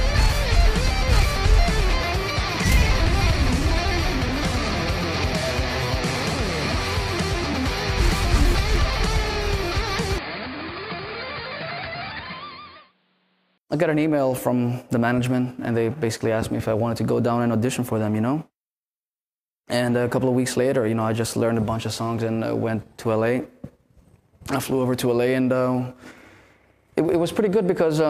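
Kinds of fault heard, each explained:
Input switched to a poorer device: from 10.18 to 13.58 s the sound turns duller and boxier with nothing above about 4.9 kHz, drops roughly 10 dB, and carries a new noise floor around 35 dB below the signal, then clears again. There is no silence at either switch, which points to a likely change of input device. A spectrogram shows a hard ceiling at 4.9 kHz across that span, and the waveform shows a visibly smaller envelope.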